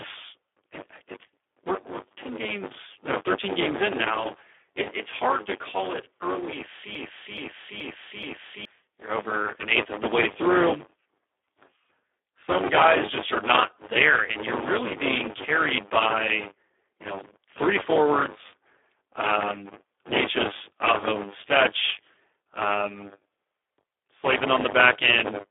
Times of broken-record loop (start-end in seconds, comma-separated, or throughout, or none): 6.95-8.65